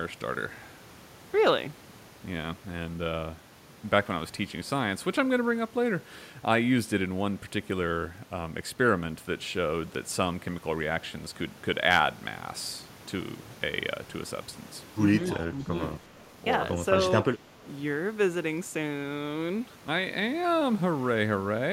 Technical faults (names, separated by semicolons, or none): speech suppressed in double talk; echo leak